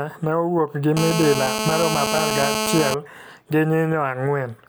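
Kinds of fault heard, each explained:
GSM phone buzz: a nearby 2G handset transmits in bursts 217 times a second, and the audio circuitry rectifies those pulses. Here a harsh, harmonic-rich 217 Hz rasp runs steadily, as during a call, from 0.97 to 2.94 s, about 2 dB below the speech.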